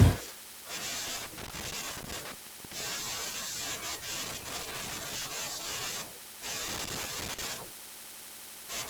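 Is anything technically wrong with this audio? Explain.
Yes. Three irregular bursts of scratchy crackle cut into the speech, from 1.07 to 2.80 s, 4.23 to 5.28 s and 6.68 to 7.45 s. This is loose connector crackle: a worn or dirty contact rapidly makes and breaks as it shifts, chopping the signal into fragments.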